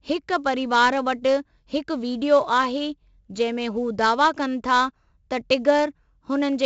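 A speech recording with a gritty hiss riding on every loud syllable from start to finish, rising and falling with the level, and a dull top end with nothing above 7.8 kHz. This is heavy 4-bit ADPCM compression: each sample is coded as a coarse 4-bit step from a prediction, so the quantisation error tracks the signal as broadband grit. The 64 kbps rate points to a 16 kHz sample rate, which explains the missing treble.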